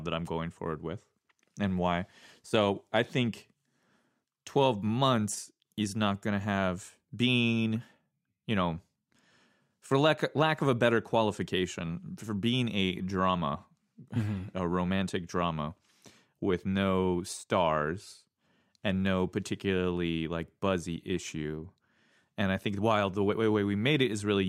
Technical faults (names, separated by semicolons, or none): none